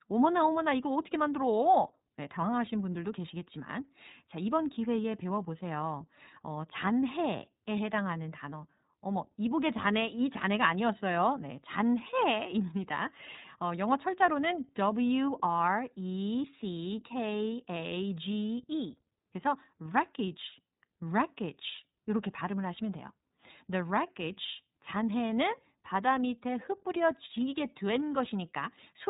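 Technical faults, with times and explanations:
Throughout, iLBC codec: the speech is band-limited, with nothing above 3.8 kHz, so sibilants and consonant detail lose their top end and the sound is narrowband. Each block of audio is coded independently, with no help from the block before. That leaves a plainly audible rough, slightly synthetic grain on the speech, which fits the 13.33 kbps mode working on 30 ms frames.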